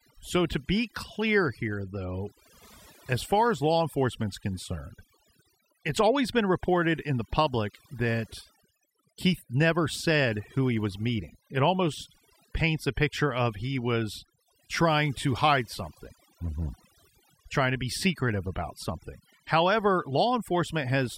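Overdone noise removal runs through the whole of this speech clip, from start to finish. A noise reduction stage set far too aggressively is pulling individual frequency bands down to almost nothing whenever they sit close to its idea of the noise floor, and the softer parts of the voice fall below that line too. The gaps between phrases collapse into near silence sprinkled with twinkling specks.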